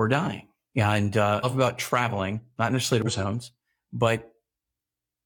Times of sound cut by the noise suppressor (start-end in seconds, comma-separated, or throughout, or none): none